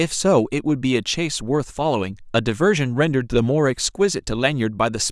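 Speech recording with no audible technical faults.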